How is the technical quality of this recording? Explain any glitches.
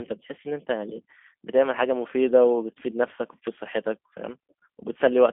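Quality's held back by plainly audible narrowband telephony coding throughout. The whole recording carries G.729 codec damage. Everything below about 200 Hz and above 3.5 kHz is gone, and the speech has been rebuilt from a vocal tract filter, a pitch predictor and a few pulses per frame, which fits the 8 kbit/s G.729A variant. It sounds plainly rough and a bit synthetic, with a thin, boxy phone-line tone.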